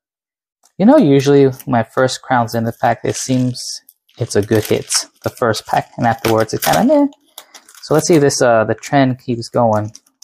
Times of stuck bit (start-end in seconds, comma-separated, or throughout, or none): none